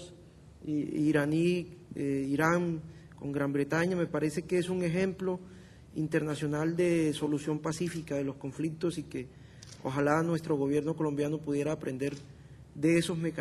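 No technical faults can be heard anywhere in the recording.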